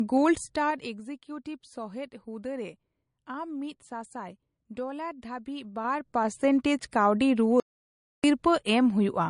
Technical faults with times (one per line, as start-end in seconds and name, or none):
0.00-9.30 low-bitrate audio saved at a high bitrate
0.34-1.02 zipper noise
7.60-8.24 audio dropout to silence